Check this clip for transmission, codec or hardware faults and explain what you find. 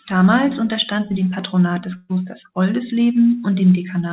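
One transmission fault stands out, heard over a call path whose coding leaves nothing above 4 kHz. From 1.96 to 2.11 s there is a burst of packet loss. About 140 ms of audio never arrived, and the receiver stretched the last sound and faded it, leaving a held buzz or dying hiss. Unlike a plain dropout, the gap isn't silent. The speech then jumps ahead, with that stretch missing.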